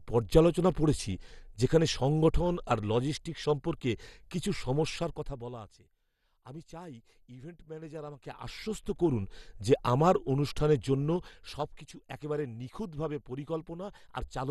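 Throughout, the speech sounds dull and gurgling, with nothing above 12.2 kHz and a granular edge. This is likely MP2 compression at a low rate, around 64 kbps, where upper sub-bands drop out and the remaining bands are coarsely quantised.

Zipper noise appears three times, each a level change applied in steps of about 2 dB with no smoothing, so every step ticks audibly. From 4.92 to 5.81 s, after "আর লজিস্টিকস সম্পর্কে কিছু", the level falls by roughly 25 dB at about fifteen steps per second. From 7.76 to 9.24 s, between "আমি চাই ইভেন্ট" and "যে আমার অনুষ্ঠানের জন্য", it rises by roughly 25 dB at about seven steps per second. From 11.10 to 11.94 s, just before "একেবারে নিখুঁতভাবে", it falls by roughly 15 dB, again at about seven steps per second.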